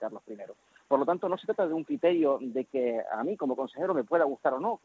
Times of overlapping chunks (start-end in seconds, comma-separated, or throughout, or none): none